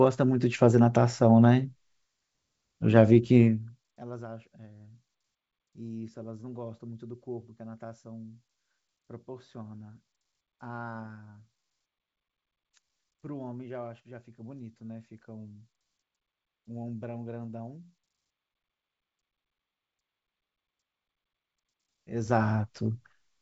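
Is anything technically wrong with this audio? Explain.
No, nothing here sounds technically wrong; it's just speech carried over a wideband phone-style channel that tops out somewhere under 8 kHz, with the level moving gently up and down along the way.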